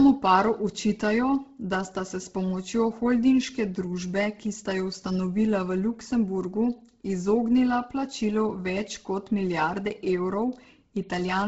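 Throughout the speech, heavy Bluetooth LC3 compression likely explains the breathy, grainy edge: little survives above 7.7 kHz, and a spectrogram shows sparse, noise-filled upper bands.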